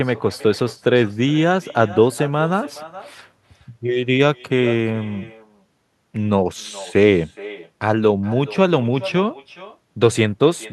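Throughout, there's echo with no canceller: a far loudspeaker feeds the mic, so every phrase returns roughly 0.4 s later, about 18 dB down, thin.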